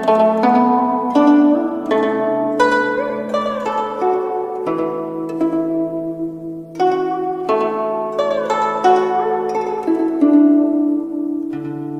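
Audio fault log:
Throughout, doubled audio track: there's a second full-band copy trailing the original by around a tenth of a second and roughly 5 dB down, with no decay or room colour on it. Likely a second capture path or misaligned edit stacking two copies.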